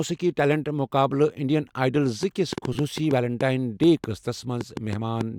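From 2.23 s to 5.22 s, a train of clicks runs over the speech. The pops come about 4.4 times a second, at an uneven pace, roughly fifteen in all. They stand out sharply, about 10 dB above the signal. They carry on through the pauses too. Their similar shape points to an outside source. The likely cause is interference from nearby equipment or a faulty connection or power supply.

Between 2.73 s and 2.75 s, inside that stretch, the sound stutters. This is repeated frames. A tiny slice of compressed audio was played again four extra times. The pattern fits blocks of about 5.8 ms. The repeats add 23.2 ms to the clip's length.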